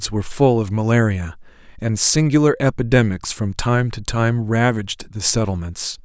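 No technical faults can be heard anywhere in this recording. Nothing in the speech calls for a time or a value to point to.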